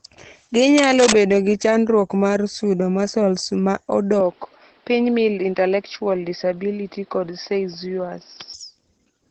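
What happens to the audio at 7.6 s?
At 7.6 s the speech sounds duller and narrower, with nothing above about 5.6 kHz and a faint new noise floor roughly 35 dB below the voice. This runs from 4.20 s to 8.54 s, entering with no gap or level jump. It is likely an input switched to a poorer device, a lower-quality microphone or headset path with a narrower band and its own hiss.

Underneath, as across the whole clip, the speech is hoarse and muffled, with nothing above about 8.6 kHz. That character points to heavy Opus compression in its SILK speech mode, at a very low bitrate around 12 kbps. Starved of bits, the codec thins and roughens the voice.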